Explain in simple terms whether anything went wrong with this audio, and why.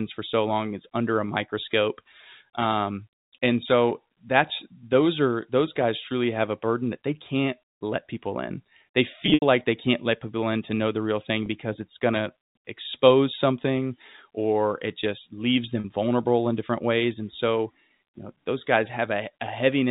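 There are three brief glitches from packet loss with pitch repetition, at 9.26–9.42 s, 11.46–11.48 s and 15.80–15.84 s. Chunks of the audio went missing, so the receiver repeated the last bit of pitch, giving a short buzzy hold. The first is the longest, with gaps up to 80 ms. The telephone sound itself comes from ordinary G.711 telephone coding.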